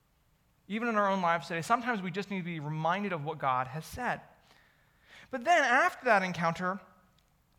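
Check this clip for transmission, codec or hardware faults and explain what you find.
No faults detected.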